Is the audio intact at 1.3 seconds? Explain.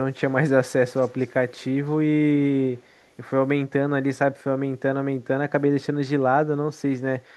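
No. At 1.3 seconds the speech is at the very end of an echo leak that runs from 0.96 s. A faint, delayed copy of the speech trails the original by about 324 ms. It sits far below the direct sound. The likely cause is a loudspeaker on the far end whose echo canceller let part of the returning sound slip back into the call.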